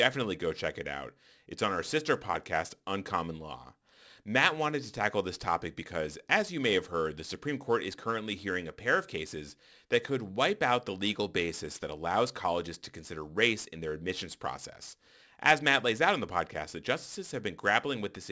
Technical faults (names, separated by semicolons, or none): aliasing